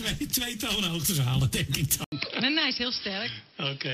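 At 2.04 s the sound cuts out for 80 ms, then returns duller and somewhat quieter, with nothing above 5.5 kHz and a new, faint background noise through to the end. The cause is likely the input switched to a poorer, narrower-band device.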